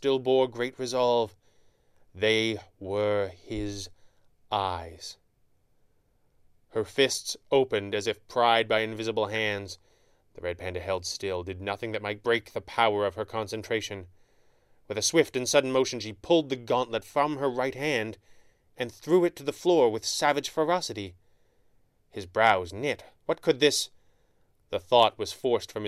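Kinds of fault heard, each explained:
DAB burbling: uncorrected bit errors make single sub-bands jump in level, a burst of errors across 9 frames from 12.36 to 12.53 s, showing as scattered bright blocks on a spectrogram.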